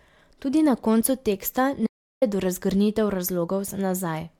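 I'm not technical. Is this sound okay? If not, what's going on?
No. An audio dropout to silence runs from 1.87 to 2.22 s, right after "na koncu teksta": the input likely disconnected, leaving 0.35 seconds of dead silence.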